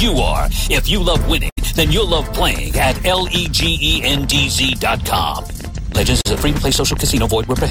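A burst of packet loss hits the audio from 1.49 to 1.59 s. Roughly 80 ms of the stream failed to arrive in time, and the receiver covered about 75 ms of that hole by stretching the last sound it had and letting it fade, so the audio briefly hangs as a held, dying tone or hiss before jumping ahead with the missing stretch gone. A train of clicks starts at 2.42 s and runs to the end of the clip, about 11.5 sharp, similar pops per second at an uneven spacing, peaking a little above the level of the sound itself and audible through any pauses as well. The likely source is interference from nearby equipment or a faulty connection or power supply, injecting the same pulse over and over. A short concealed packet loss follows at 6.21 to 6.27 s, where about 40 ms never reached the decoder; roughly 38 ms of it was patched by continuing the preceding sound before blending back into the real signal, leaving a brief smear or wobble in the middle of the clicking.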